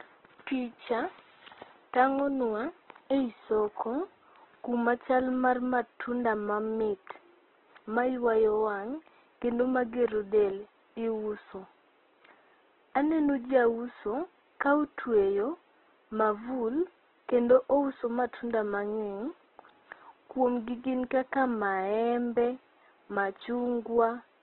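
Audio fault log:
Throughout: Opus compression, heavy. Speech sounds rough, grainy and band-limited, likely from music-mode coding starved of bits, consistent with roughly 12 kbps.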